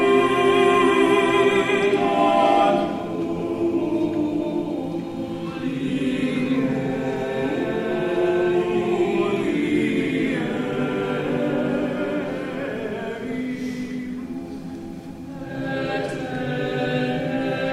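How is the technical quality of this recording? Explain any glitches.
No glitches turn up anywhere in the recording, and the signal holds steady and intact throughout.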